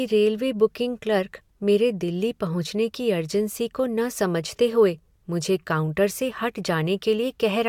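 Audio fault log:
No technical fault can be heard anywhere in the signal.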